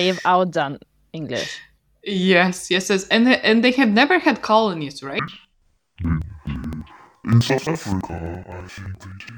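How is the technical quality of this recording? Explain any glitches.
The recording has one clear fault. It starts at 5.19 s, right after "have never had colonies", and lasts to the end. It is interleaved audio read as planar. Each block of about 85 ms, which fits a 4096-sample block, had alternating left and right samples split into halves. Both halves play at half speed. The speech drops an octave, sounds doubled, and chops at about 11.7 Hz.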